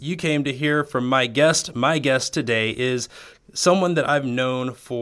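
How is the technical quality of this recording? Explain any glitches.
No glitches can be heard anywhere in the speech recording. There are no technical faults to explain.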